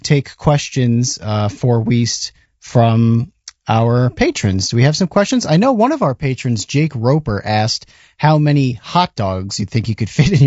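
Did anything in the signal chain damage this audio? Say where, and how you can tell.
Yes, at the codec stage, across the whole speech clip. The voice sounds rough and grainy throughout, with a hiss filling the gaps between harmonics and an upper band that sounds thin and synthetic. The likely cause is low-delay AAC compression of the AAC-ELD kind, whose short frames resolve pitch harmonics poorly, and the plainly audible damage fits a bitrate around 32 kbps. On a spectrogram, harmonic stripes look smeared with noise between them and the top band looks patchy.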